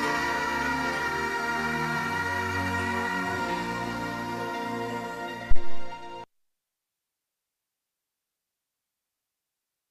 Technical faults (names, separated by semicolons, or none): phantom power thump